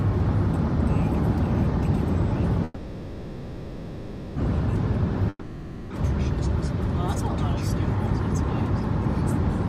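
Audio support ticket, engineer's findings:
Call audio freeze, 2.64 to 4.37 s: last sound stretched into a fading buzz for about 1.7 s, then picks up right where it stopped. Likely jitter buffer underrun, packets held up, nothing lost.

Long network dropout, 5.29 to 5.91 s: fading buzz then a brief near-silent tail, comes back with roughly 0.8 s of audio gone. Likely packet loss, and playback ends up slightly earlier.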